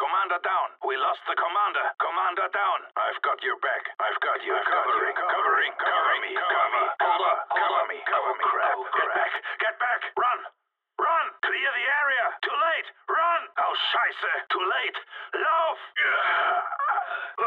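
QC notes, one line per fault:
4.32–9.36 s, doubled audio track: a second, full-band copy of the same sound runs about half a second behind the original, at roughly the same level. It carries no decay or room colour, so it reads as a clean repeat rather than an echo. It cuts in abruptly at 4.32 s and drops out just as abruptly at 9.36 s. The likely cause is the signal being captured twice, once through a slower path.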